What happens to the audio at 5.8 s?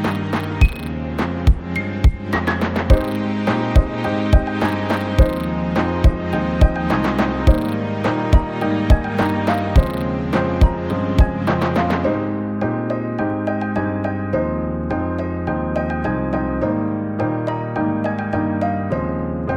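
At 5.8 s there are clock slip clicks, faint regular ticks about every half second from 0.52 to 19.44 s, likely one-sample slips between unsynchronised clocks differing by around 40 ppm.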